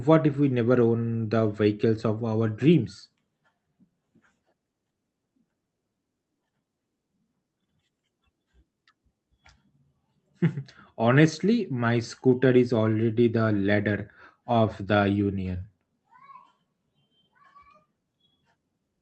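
No faults can be heard in this speech: it shows only the ordinary character of an Opus call path, with the top end stopping at about 8 kHz and the light coding texture you'd expect from a mid-rate setting around 40 kbps, and nothing beyond that.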